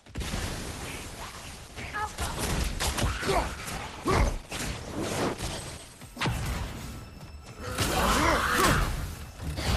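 From the start until 6.0 s the sound is dull and smeared, with thin or synthetic-sounding treble and nothing above 12 kHz, then it clears abruptly without a gap. This is an adaptive stream starting at a low bitrate. The coding points to a low Opus rate, around 16 kbit/s, before stepping up to a better one near 64 kbit/s.

From 8.49 to 8.66 s a dense, uneven burst of scratching and rustling sits over the sound, at roughly 10 dB below it. This cable scratch noise is likely from a worn cable, connector or control being moved.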